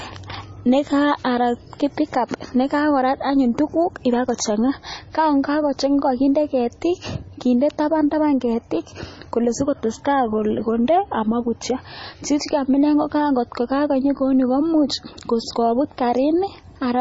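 From start to finish the speech has heavy damage that sounds like likely MP3 compression, pointing to a low bitrate around 24 kbps. Nothing gets through above 7.6 kHz, so it's dull, and weak detail flickers frame to frame, giving a watery, swirly texture.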